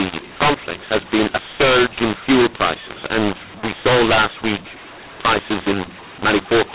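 From start to finish the speech carries a mu-law and A-law mix-up: audio coded as mu-law is decoded as A-law, scrambling levels so some come out too loud, others too soft, and pauses fill with noise. Unlike ordinary clipping, quiet samples get distorted too.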